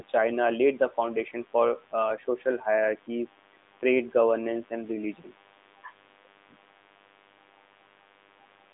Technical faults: mains buzz

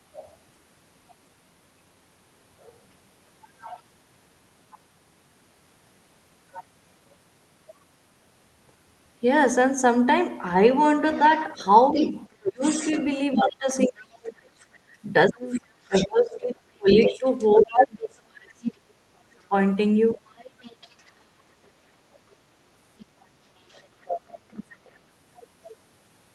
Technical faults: other side's voice leaking through; speech suppressed in double talk

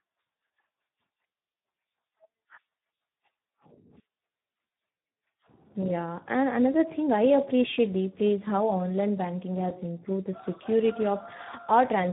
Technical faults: Speex codec

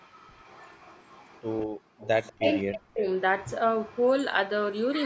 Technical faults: echo leak; background gated by the echo canceller; speech suppressed in double talk

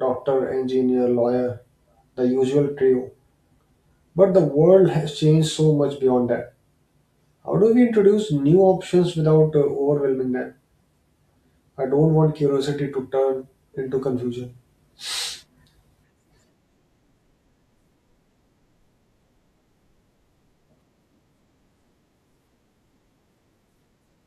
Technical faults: none

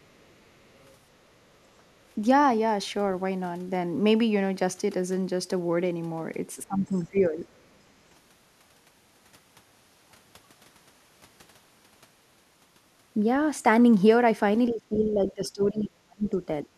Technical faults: other side's voice leaking through; speech suppressed in double talk

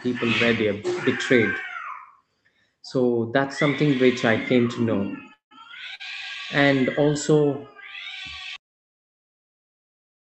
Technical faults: call audio freeze; short stall from a late packet

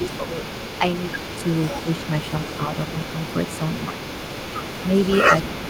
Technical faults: echo leak; speech suppressed in double talk

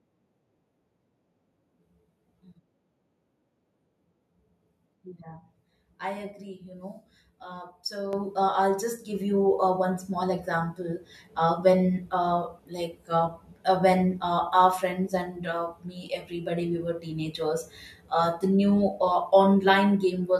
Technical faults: microphone volume stepped up

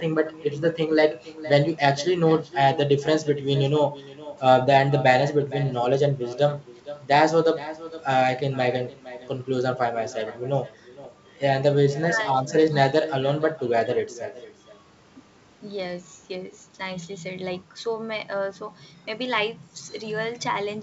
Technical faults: echo with no canceller; bit errors on an ADPCM link

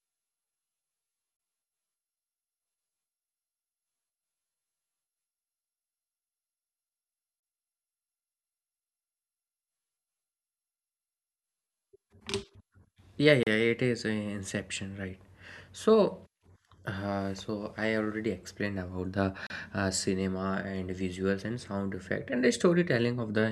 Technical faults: gap at a join of encoded pieces

